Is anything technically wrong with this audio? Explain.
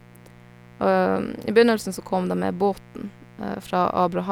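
Yes, there is mains buzz under the speech for the whole clip. Switching spikes on the 60 Hz supply produce harmonics reaching several kHz, heard as a raspy buzz around 25 dB down, unlike a smooth, low-pitched hum.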